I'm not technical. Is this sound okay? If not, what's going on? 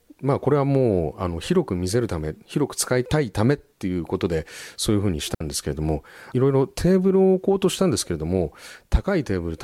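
No. At 5.35 s the speech drops out completely for about 60 ms, a clean gap of near silence with no crackle around it. This is a digital wireless dropout: the wireless link briefly lost too much data, so the receiver muted.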